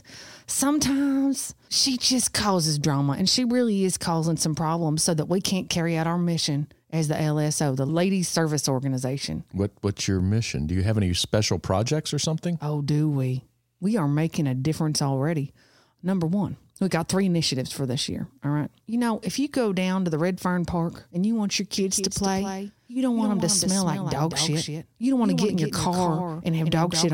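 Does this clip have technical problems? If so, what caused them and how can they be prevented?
Yes. From 21.77 s to the end, the speech carries a doubled audio track: a full-band copy trails the original by roughly a fifth of a second at around 5 dB lower, dry and without room colour, and it cuts in abruptly. The likely cause is a second, slower capture path or misaligned edit layers. On a spectrogram every syllable appears twice, shifted sideways, and the waveform shows echoing envelope peaks. Monitor only one input path and check edits for duplicated, offset regions.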